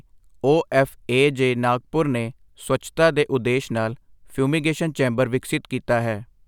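No technical faults can be heard anywhere in this speech recording. There is no event in it to place in time or trace back to a cause.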